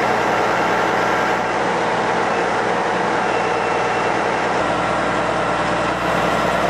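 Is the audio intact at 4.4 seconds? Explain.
No. At 4.4 s you're in the middle of a digital radio blending to analogue that runs from about 1.34 s to 6.09 s. The receiver lost its digital stream and cross-faded over roughly 186 ms to the station's FM broadcast. So you get that FM character: a level drop of about 2 dB, and a hiss floor sitting roughly 30 dB under the audio.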